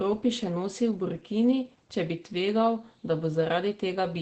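Opus voice compression runs throughout. Coarse SILK coding, consistent with roughly 12 kbps, leaves speech muffled and hoarse, and the spectrogram shows nothing above 8.7 kHz.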